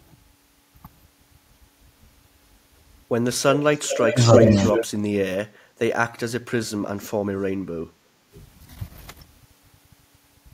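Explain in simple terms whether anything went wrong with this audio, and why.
Echo leak, from 3.73 to 4.86 s and again briefly at 7.01 s: a copy of the speech returns about a third of a second late, likely because a speakerphone's echo canceller let some through.

Speech suppressed in double talk, at 4.1–4.62, 4.92–4.97, 5.53–5.59 and 7.85–7.9 s: the speech dips or briefly cuts out, likely because the canceller turned everything down while both sides talked at once.

Background gated by the echo canceller, at 8.18–8.32 s: the room sound drops away for a moment because the canceller turned the microphone down hard while the loudspeaker played.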